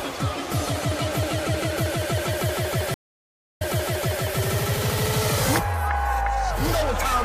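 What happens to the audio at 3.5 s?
At 3.5 s the clip is inside a stream reconnect that runs from 2.94 s to 4.24 s. The connection dropped, so playback falls silent for about 0.63 s while the player reconnects and starts a fresh decoder mid-stream. When sound returns it has jumped back roughly 0.68 s, repeating material already heard, as the server resends a burst, and the first moment after the restart comes in muted or faded.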